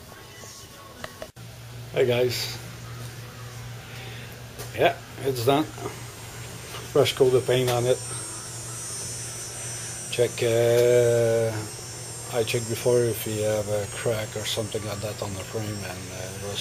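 No technical faults detected.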